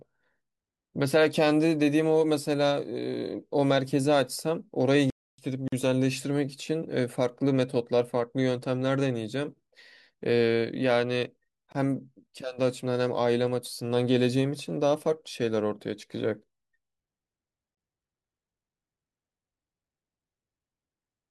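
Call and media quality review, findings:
Playback stall, 5.10 to 5.38 s: speech cuts out for about 280 ms mid-flow, then resumes where it stopped. Waveform shows a flat dead segment, and the spectrogram shows a blank vertical band. Likely player buffer underrun or a blocked audio thread.

Gap at a join of encoded pieces, at 5.68 s (45 ms), 11.72 s (24 ms) and 17.75 s (24 ms), every 6 s: short silences cut into continuous speech. Separately encoded segments were concatenated without trimming encoder delay and final-frame padding. These appear as narrow empty slots with smeared codec edges.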